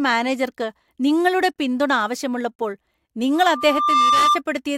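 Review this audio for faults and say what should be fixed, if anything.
Loudspeaker feedback squeal runs from 3.35 to 4.42 s. A 1.2 kHz tone builds for under a second to about 5 dB above the speech. The microphone hears its own loudspeaker, and loop gain exceeds one there. Separate microphone and speaker, or lower monitor gain.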